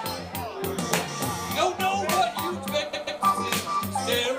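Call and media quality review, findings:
Repeated frames, 2.93–3.21 s: a 139.3 ms block of compressed frames plays twice more, stuttering; encoder or transport duplication adds 278.6 ms.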